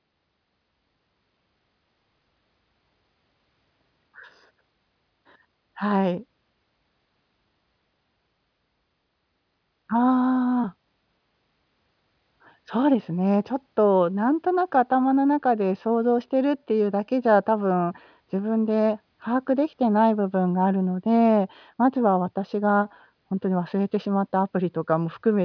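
No technical faults can be heard anywhere in the recording.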